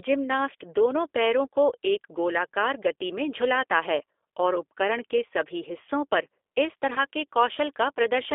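Throughout, the speech has passed through the G.729 codec, most likely the 8 kbit/s G.729A variant. It rebuilds each 10 ms frame from a vocal tract filter, a pitch predictor and a few pulses, so the sound is plainly rough and synthetic, confined to roughly 300 Hz to 3.6 kHz.

From 6.94 to 7.00 s, just after "सभी हिस्सों पर इस", packets went missing and the codec concealed the gap. About 20 ms was lost, which fits two 10 ms frames. The decoder extended its last pitch and filter, so the speech briefly stretches into a buzzy tone or coloured noise and fades before recovering.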